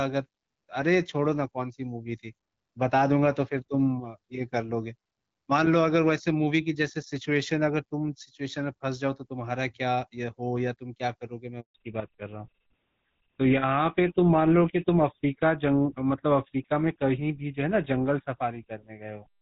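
A speech recording carried as HD Voice, with the light coding typical of AMR-WB at around 12.65 kbit/s, breaks at 11.60 s with a handover gap: the sound cuts out for 140 ms, to 11.74 s, as the call switches networks. On a waveform this is a flat line, and on a spectrogram a blank vertical strip. Right after, at 11.74 s, comes a fallback to narrowband that lasts to the end: nothing above 4 kHz remains, so the spectrogram's energy stops at a hard ceiling, and the sound turns duller and rougher, pointing to the older GSM full-rate codec.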